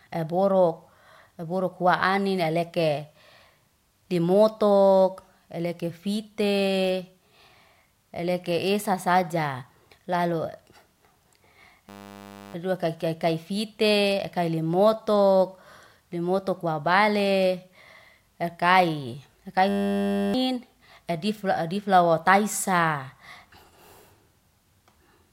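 At 11.89 and again at 19.69 s, right after "ef'kai ef'kai", a system hang loop freezes playback on a 10 ms buffer, giving a steady 100 Hz buzz for about 0.65 s each time and swallowing roughly 0.7 s of audio.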